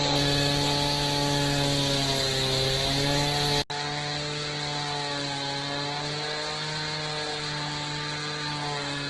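From the start, these everyday sounds carry heavy damage, likely from Opus compression at a low bitrate, which fits roughly 12 kbps in its music mode. Nothing is left above 12.1 kHz, and tonal parts turn grainy and rough rather than watery. Unlike MP3, the encoder fills starved bands with folded or noisy energy instead of leaving gaps. The result is a granular texture without the swirling, bubbly holes MP3 leaves behind.

At 3.62 s an 80 ms silence breaks the sound. From there to the end the top closes in further, with nothing above 9.2 kHz. The level drops by about 5 dB, and a new background hiss sits roughly 35 dB under the sound. This is likely an input switched to a poorer device. The gap at the switch, the new noise floor and the level shift set it apart from a plain filter or EQ change, which would only dull the tone.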